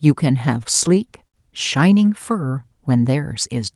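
From 0.63 to 1.35 s, repeated stalls (stutter): late packets drained the jitter buffer seven times, and stretched sound filled each gap, up to 58 ms. The speech drags and stutters.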